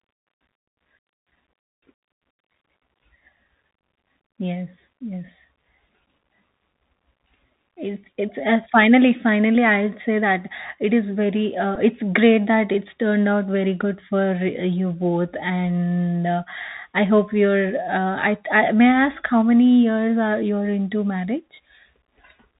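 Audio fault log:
throughout: Bluetooth CVSD headset codec. The speech passes through a narrowband headset link where each sample is coded as a single up-or-down step with an adapting step size, which fits a 64 kbps CVSD stream. Damage is plainly audible: s sounds turn scratchy, bright loud passages distort where the steps can't keep up, and a granular hiss sits under the speech. On a spectrogram the energy stops at a hard ceiling near 4 kHz, above a speckled noise floor.
11.75 s: Bluetooth headset packet repeated. Packets between headset and phone went missing, and the chip decoded the previous packet's bits again in their place. About 7.5 ms of audio was replaced, which fits two 3.75 ms packets, so the repeat sounds like a tiny rough tick or flutter rather than a sustained buzz. On the waveform a short stretch of samples repeats back to back at a 3.75 ms spacing. On a spectrogram it shows as a brief vertical smear across the band.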